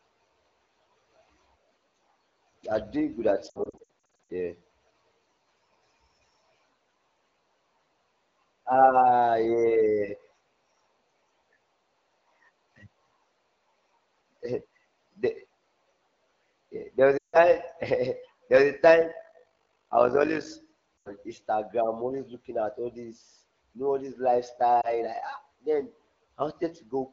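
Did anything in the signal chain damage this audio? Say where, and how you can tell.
Yes. Lost AMR speech frames, network/radio stage: from 3.49 to 4.30 s, right after "are doing good at", short gaps scatter across 800 ms, the longest about 60 ms. Runs at 17.18 to 17.37 s and 20.99 to 21.14 s drop to near silence, and 24.81 s is a single dip. The decoder is concealing corrupted frames with decaying repeats.

Overlap-add ripple, call-processing stage: from 19.12 to 20.50 s the level pulses about 11 dB at around 50 Hz, a rough robotic flutter. Frames are being rejoined with an overlap that does not sum to constant gain, so each frame boundary shows up as a level swing.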